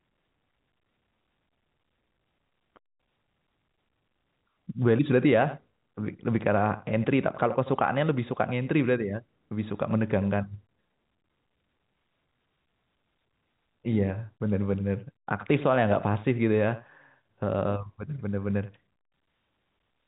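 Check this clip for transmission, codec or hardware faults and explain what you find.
No faults found.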